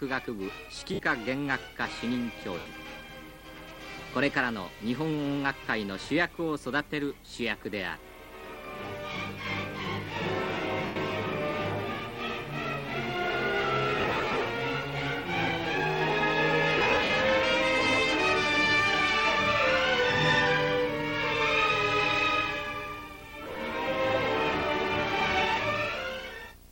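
Lost LE Audio frames cause six gaps: 0.94–0.99, 2.59–2.66, 10.86–10.96, 13.99–14.41, 16.78–17.10 and 23.44–23.56 s. The LC3 decoder refills each gap with the last spectrum and random signs, smearing tones into brief noisy hiss. The last three gaps are scattered short losses.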